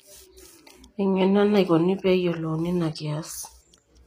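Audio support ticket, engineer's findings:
Throughout: gritty, metallic s sounds; nothing above 15.4 kHz. Likely HE-AAC compression, treble rebuilt from copied lower bands with misaligned harmonics; fits a low bitrate near 24 kbps.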